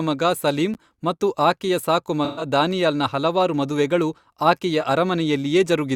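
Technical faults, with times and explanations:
0.74 s, block of digital silence: just after "ಮಗ ಸಲೀಂ", about 11 ms drops to silence with hard edges, heard as a click. This fits a 512-sample buffer left unfilled. It shows as a thin blank vertical strip on the spectrogram and a flat line on the waveform.
2.24–2.45 s, AAC frame loss with concealment: after "ಮಗ ಸಲೀಂ ಮತ್ತು ಆಕೆಯ", about 150 ms of lost data is patched from the previous spectrum, giving a smeared, noisy stretch. The spectrogram shows blurred, frozen-looking harmonics.
2.71 s, block of digital silence: a gap of under 1 ms just before "ಹಲವಾರು ಮದುವೆಗಳು" is heard as a tick. It appears as a hairline notch in the waveform.
4.81–4.84 s, AAC frame loss with concealment: a 21 ms dropout, the length of a single frame, is filled with resynthesised spectrum and heard as a brief phasey smudge. On the spectrogram it is a short, slightly smeared slice.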